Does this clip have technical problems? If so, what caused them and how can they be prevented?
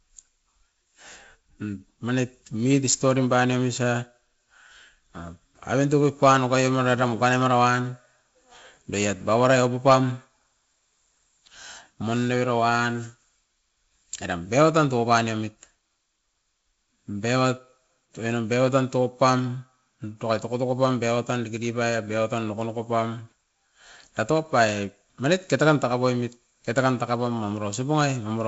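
No, nothing stood out on listening to this speech clip, which comes through G.722 wideband telephone coding at 48 kbit/s with nothing above about 7.7 kHz, so there is no problem to trace or prevent.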